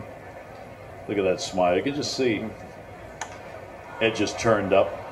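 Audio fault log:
No faults detected in the clip; nothing to log.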